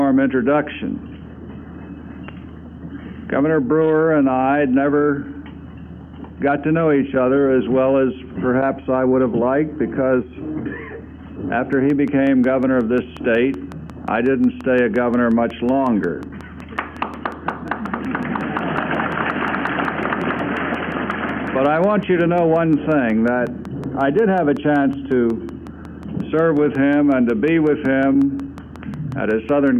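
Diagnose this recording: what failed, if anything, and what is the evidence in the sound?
A train of clicks from 11.73 to 29.68 s: regular ticks at 5.5 per second, about as loud as the audio, likely interference pickup in the analogue wiring.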